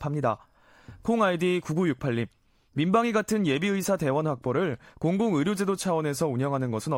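No audible technical faults present.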